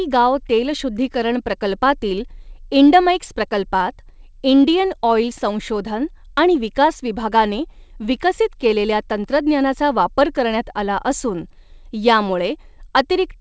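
Speech carried over a WebRTC call path whose wideband G.722 coding band-limits the audio at 8 kHz, with no technical faults present.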